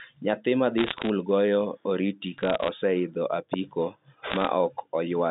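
Bit errors on a digital phone line crackle through 0.78 to 1.09 s before "goyo oriti", 2.38 to 2.69 s before "oseidho apiko", and 4.26 to 4.47 s. Flipped bits, well under one percent, corrupt single samples, and sign or high-bit hits become sharp ticks over the band-limited G.711 speech.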